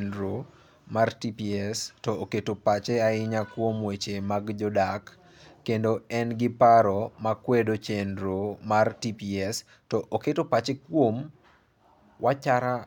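Listening to this speech recording, nothing stood out as a technical problem at any point.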